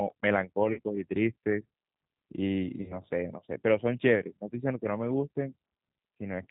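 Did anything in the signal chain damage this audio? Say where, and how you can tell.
Yes. Throughout the clip the speech sounds band-limited and slightly rough and synthetic, with nothing audible above 4 kHz, and the codec damage is plainly audible. That points to the codec stage, specifically the G.729 codec, and the damage fits an 8 kbit/s stream. The decoder rebuilds the speech from a vocal-tract filter, a pitch predictor and a few pulses per short frame, so fine detail and all the upper band are simply not carried.

At the network stage there are two dropouts concealed by the codec, from 0.73 to 0.80 s and from 2.82 to 2.95 s. In each, the speech is stretched into a buzzy tone or a coloured noise that fades instead of cutting to silence, and the sound stays weak for a moment after it returns. This is VoIP packet loss concealed by the speech codec. About 40 ms of audio was lost at the first gap, which fits two 20 ms packets, and about 60 ms at the second, which fits three. 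The decoder extrapolated from its last pitch and filter state with falling gain, and because each frame builds on the last, it needed time to recover.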